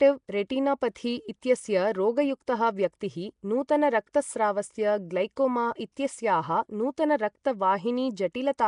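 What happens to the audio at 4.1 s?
At 4.13 s a short burst of hiss, about 12 ms long, arrives just before a sharp attack and softens it. This is pre-echo: the transform codec spread its quantisation noise across the whole block, so noise sized for the loud onset also filled the quiet moment before it. Unlike a click, it is a smear leading into the onset, not a separate tick.

Around that moment, as through the whole clip, the speech has a rough, hissy halo and a watery smear, with nothing above 10.6 kHz. The likely cause is Nellymoser compression at a rate that fits about 44 kbps: it fills weak bands with noise, giving a grainy hiss rather than the swirling, metallic tones of other low-rate codecs.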